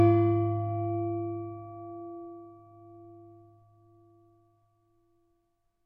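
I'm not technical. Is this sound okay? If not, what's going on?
Yes, this one's fine: nothing in it sounds broken or glitchy, so there's nothing to worry about.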